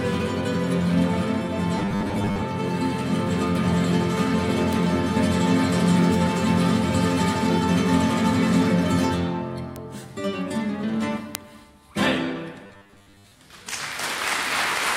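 The audio has two kinds of fault. From 1.78 to 2.43 s and from 12.65 to 13.33 s it turns into a rigid, metallic buzz at 100 Hz. This is likely robotic sound from repeated short buffers, each about 10 ms long. Roughly half the first stretch and most of the second are repeats. There are also three bit error spikes. Each is one sharp, broadband tick, at 4.73, 9.76 and 11.35 s. A flipped bit makes a sample jump by a power of two and snap back. The first two ticks hit one sample each, and the third hits two in a row.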